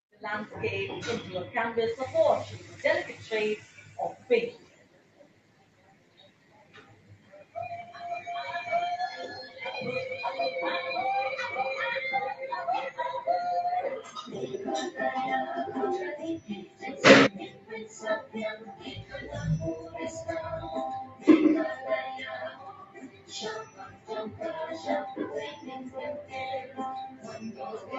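A noise suppressor applied to music or sounds sits on the whole clip. It's a speech-tuned noise suppressor that treats steady, sustained material as noise and keeps pulling it down. You hear the level swing by something like 20 dB as it grabs and releases, so sudden hits come through while held material sinks. The overall effect is a pumping, fluttery, thinned-out sound. Across the clip the call microphone processing also limits the band, with nothing above 8 kHz.

In several places the sound is cut by the noise suppressor. From 3.64 to 7.55 s and again from 16.4 to 19.33 s, sustained parts drop by about 14 dB. Shorter dips follow at 19.81–19.97 s (about 9 dB) and 21.04–21.27 s (about 13 dB). Then come 22.47–23.33 s and 23.64–24.41 s, both about 14 dB down. From 25.51 s to the end the suppressor clamps down by about 13 dB.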